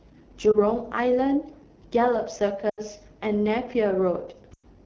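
Right from the start the speech has the rough, raspy texture of the AMR wideband (HD Voice) codec running near the bottom of its range, which fits 8.85 kbit/s. At that rate the pulse-driven vocal tract model can't capture the voice cleanly below 6.4 kHz, and the band from 6.4 to 7 kHz is filled with shaped noise instead of real detail. The result is plainly audible damage for the whole clip.

On top of that there are lost AMR speech frames. At 0.51 to 0.62 s there's a short dip or warble that fits a single dropped 20 ms frame. The decoder carries the last good pitch and vocal tract settings forward at lower gain to cover the gap. The longer gaps are at 2.69 to 2.80 s, which fits four lost frames (80 ms), and at 4.53 to 4.66 s, which fits five (100 ms). In both, the sound drops to near silence within two frames, as wideband concealment does. The speech then comes back weak or rough for a moment afterwards.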